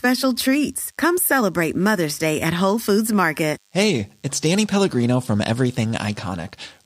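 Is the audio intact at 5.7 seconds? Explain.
No, not quite. At 5.7 seconds, like everywhere else in this speech clip, there's a DECT cordless phone buzz running underneath. A nearby DECT handset or base fires a short radio burst every 10 ms, and something in the audio path rectifies it. That leaves a thin, steady 100 Hz buzz packed with harmonics, sitting roughly 40 dB below the speech. It's quiet.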